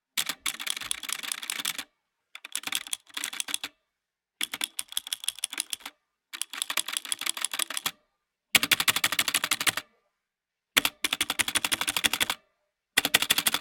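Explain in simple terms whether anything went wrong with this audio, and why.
Nothing went wrong; no faults can be heard here.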